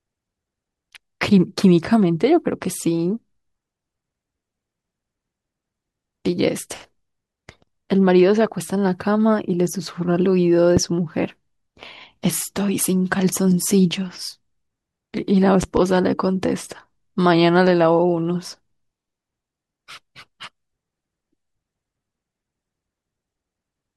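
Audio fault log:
10.77–10.80 s, loud pop: one sharp pop about 10 dB above the speech, likely a voltage spike from a plug or switch. Speech continues underneath.
15.63–15.80 s, loud pop: two quick pops at a similar level, likely a pair of voltage pulses, with speech continuing underneath.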